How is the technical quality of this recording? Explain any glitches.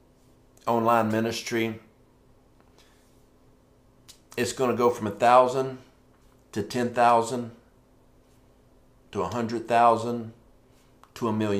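The first 4.95 s show crude rate conversion. From 0 to 4.95 s the audio sounds as if it was resampled by repeating the nearest sample instead of filtering, which fits a 32 kHz to 48 kHz step. The resulting periodic error, about 25 dB below the signal, adds a gritty, inharmonic fizz that tracks loud and bright passages.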